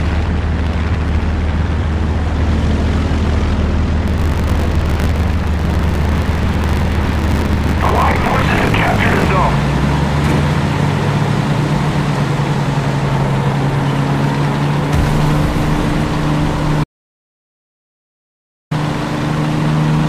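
From 4.06 to 9.29 s there is buffer tearing. The writer and the reading hardware have slipped. Roughly 40 percent of each period replays audio from about 40 ms earlier. The hard joins make a robotic 50 Hz buzz, which fits a 20 ms buffer.

At 16.84 s the sound cuts out completely. This audio dropout to silence lasts 1.87 s, until 18.71 s. The gap is silent, with no room tone. The input was likely lost while writing continued. Whatever sounded then is gone.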